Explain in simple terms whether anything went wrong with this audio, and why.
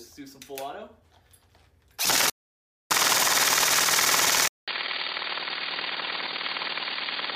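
Two things go wrong in this recording.

The first is an audio dropout to silence. From 2.30 to 2.91 seconds the sound stops completely for about 0.6 seconds. There is no background hum in that gap, just total silence. Whatever happened during that moment is simply lost. The likely cause is that the input was cut off briefly, perhaps a loose connection or a quick mute, while the recording kept running and saved nothing but silence.

The second is an input switched to a poorer device. At 4.48 seconds there is a short silence of 200 milliseconds. When the sound returns, it is noticeably quieter and duller, with a faint new background noise. The crisp top end is gone, and nothing above 4.7 kHz comes through. This lasts until the end. The likely cause is that the system switched to a weaker microphone or headset partway through.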